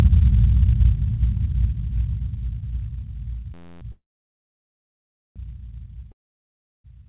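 A system hang loop from 3.54 to 3.82 s turns these everyday sounds into a steady buzz at about 86.1 Hz, as one 11.61 ms piece repeats exactly 24 times, which fits a 512-sample buffer cycling while the system froze. A call audio freeze from 3.92 to 5.38 s stretches the last sound into a fading fill and then about 1.34 s of silence, likely because held-up packets emptied the jitter buffer; the sound then resumes where it stopped, now running about 1.44 s late. A long network dropout from 6.12 to 6.86 s gives a brief fading fill and then about 0.7 s of silence, likely from packets that never arrived; when the sound returns, roughly 0.72 s of it is gone. Throughout, the G.711 mu-law call path leaves nothing above 4 kHz.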